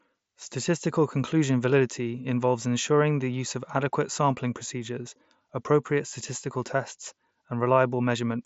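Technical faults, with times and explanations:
No technical faults can be heard in this speech clip. It passes through a Bluetooth mSBC headset codec working as designed, with nothing above about 7.7 kHz and a light grainy texture on the louder sounds.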